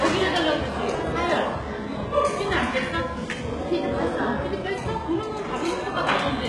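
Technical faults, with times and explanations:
Throughout, HE-AAC compression: gritty, metallic treble, likely rebuilt from copied lower bands at a very low bitrate near 12 kbps; spectrogram shows repeated upper bands stopping at 11.5 kHz.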